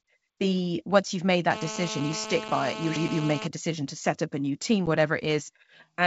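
From 1.51 to 3.47 s, a GSM phone buzz sits under the speech. A nearby 2G phone in a call pulses about 217 times a second. The audio circuit rectifies those bursts. The result is a steady, raspy buzz rich in harmonics, about 8 dB below the speech.

At 4.86 to 4.88 s comes packet loss on an ADPCM call. About one packet, 10 ms, drops to silence, leaving a hard-edged gap. The decoder's predictor and step size then drift from the sender's. Speech resumes with brief distortion before settling. The G.722 wideband coding at 64 kbit/s stays clear throughout.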